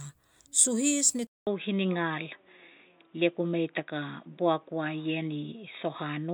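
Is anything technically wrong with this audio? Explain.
Yes. From 1.27 s the input switched to a poorer device, likely another mic. After a 200 ms gap the speech goes dull, with nothing above 3.8 kHz and faint new noise.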